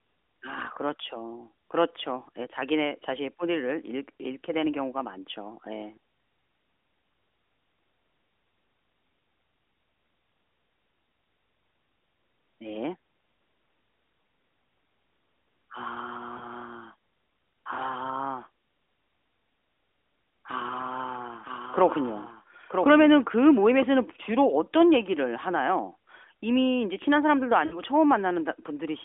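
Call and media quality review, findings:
Lost AMR speech frames, 16.38 s: quick dip and warble, about 20 ms, consistent with one dropped frame. AMR-NB decoder concealing a checksum failure by repeating the last good pitch and vocal tract settings at reduced gain.

Lost AMR speech frames, 27.66 to 27.82 s: about 60 ms gap, likely three consecutive frames. Sound smears and fades toward silence, then comes back a bit rough. Same concealment mechanism, with gain dropping further on each bad frame.

Doubled audio track, 21.43 to 23.83 s: a dry full-band second copy trails the original by about a second at roughly 5 dB down. It cuts in and out abruptly, with no decay or room tone. Likely a second capture path or a misaligned edit.

AMR narrowband path: band tops out around 3.5 kHz, light codec colouring only.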